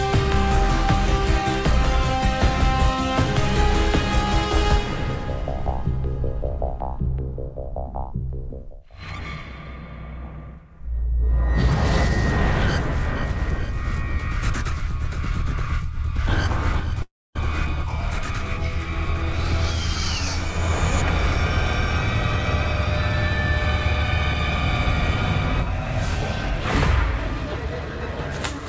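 From 17.02 to 17.36 s the audio dissolves into a fading buzz, then about 0.25 s of silence, and resumes with that stretch missing, a likely long network dropout. Unlike a brief packet-loss glitch, the concealment gives up and falls silent. Throughout, nothing sounds above 8 kHz, consistent with a G.722 call path.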